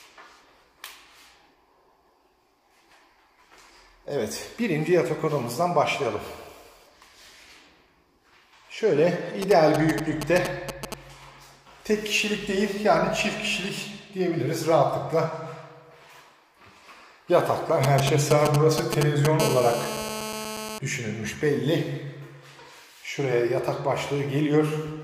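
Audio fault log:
9.42–10.94 s and 17.84–19.42 s: GSM signalling bursts. A nearby 2G phone sends short groups of radio bursts while signalling. The audio circuit rectifies them into a galloping dit-dit-dit of brief 217 Hz buzzes, slightly below the sound at first and roughly level with it the second time.
19.42–20.79 s: GSM phone buzz. Straight after the second burst run, the phone moves into a call and transmits steadily at 217 bursts per second. Rectified, this becomes a hard, raspy 217 Hz buzz rich in harmonics, about 7 dB below the signal.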